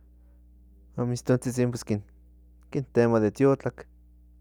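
A speech recording with mains hum throughout: a steady 60 Hz tone, about 30 dB under the voice, from power-line coupling. A spectrogram shows an unbroken horizontal line at 60 Hz.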